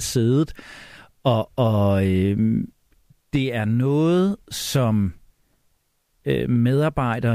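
No technical faults can be heard in this speech recording.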